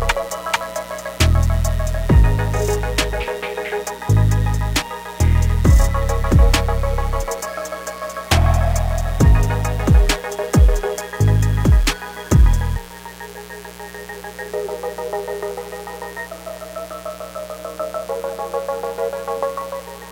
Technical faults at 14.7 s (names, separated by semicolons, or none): mains buzz